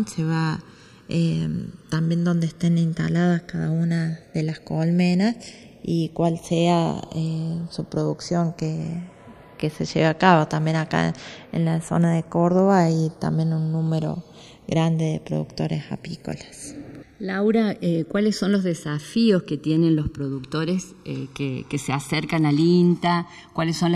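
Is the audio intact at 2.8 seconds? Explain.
No. The channels are drifting apart throughout. Clocks about 70 ppm off slide the inter-channel delay toward roughly 1 ms, heard as slow flanging when summed to mono.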